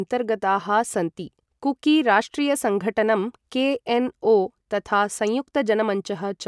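No technical faults are audible.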